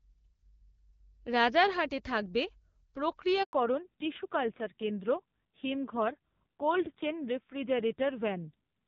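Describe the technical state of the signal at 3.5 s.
At 3.5 s the speech has dropped out completely. It fades within a few tens of milliseconds at 3.43 s and stays silent until 3.53 s, a 100 ms hole. This is a handover gap: the call was passed from one network to another, and no speech frames arrived while the link switched. Whatever was said in that tenth of a second is gone rather than muffled, because there was nothing for the decoder to play.

When the sound returns at 3.53 s it is duller and grainier. Everything above 4 kHz has disappeared, and it stays that way to the end of the clip. This is a fallback to narrowband: after the handover the call left the HD Voice wideband codec, which before the gap gives clear speech with only light coding damage, and went to an older narrowband codec. The added roughness fits a low narrowband rate of around 5.9 kbit/s.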